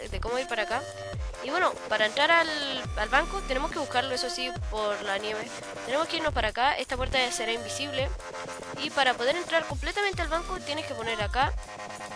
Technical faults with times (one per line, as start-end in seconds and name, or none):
none